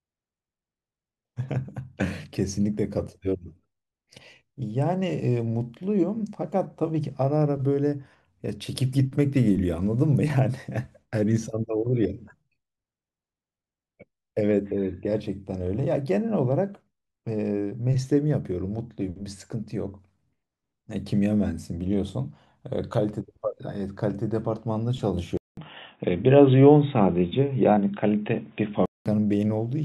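A speech recording in which, at 25.37 s, the sound drops out for about 0.2 s and then comes back dull and boxy, with nothing above 3.8 kHz, a level shift of roughly 5 dB and a different, faint background noise some 45 dB down. Full bandwidth returns at 29.06 s. The likely cause is an input switched to a poorer device. The brief silence, the new noise floor and the level change set it apart from a plain bandwidth cut by a filter or codec.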